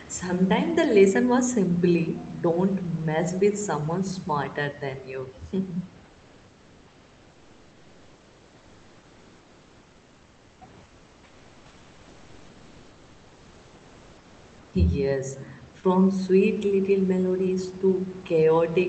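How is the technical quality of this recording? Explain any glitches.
Two stretches of comfort noise in place of the background, 6.05 to 10.61 s and 10.83 to 14.73 s. The real room noise gives way to a flat, featureless hiss about 2 to 3 dB quieter. This is likely Opus DTX stopping transmission during pauses, with the receiver synthesising filler noise. The call path's top end stops around 8 kHz.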